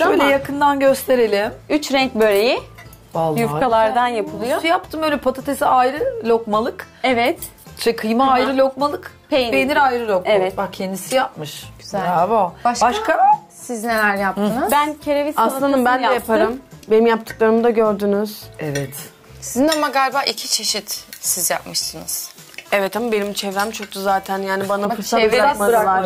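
From 19.68 to 24.85 s the audio turns thin, bright and sibilant, with treble about 11 dB hotter at 10 kHz than at 1 kHz: pre-emphasis left on, fitting an uncorrected J.17 boost.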